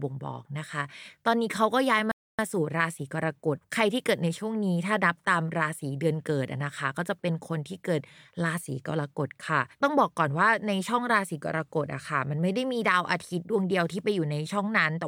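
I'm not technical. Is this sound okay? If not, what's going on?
No. At 2.12 seconds the speech stops dead and goes silent until 2.39 seconds, then carries on from exactly the point where it stopped. This is a rebuffering stall: the player ran out of downloaded audio and waited about a quarter of a second for more to arrive. Unlike a dropout, where part of the sound is skipped, nothing is missing here. The clip simply runs 0.27 seconds longer than it should.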